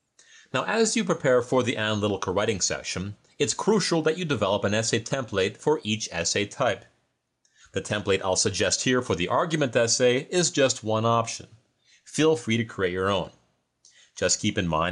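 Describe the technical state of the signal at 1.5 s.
At 1.5 s you're hearing gain pumping, and it runs through the whole clip. The level ducks under each loud sound and climbs back afterwards, swinging by around 5 dB. That's likely input gain set too high, with a fast limiter or compressor clamping down.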